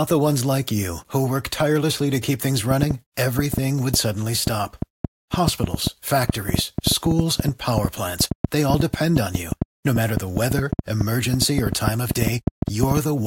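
From 2.71 s to 12.98 s, an irregular train of clicks, about six per second, pops over the speech and pauses, probably interference from nearby equipment.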